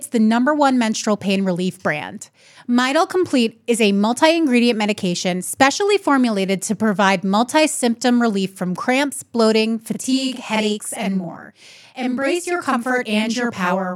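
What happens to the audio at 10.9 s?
A channel delay (doubling) runs from 9.94 s, after "relief from cramps bloating", to the end. A copy about 43 ms late, fitting a 2048-sample buffer, is summed to mono. It produces a same-level slap rather than a decaying reverb tail.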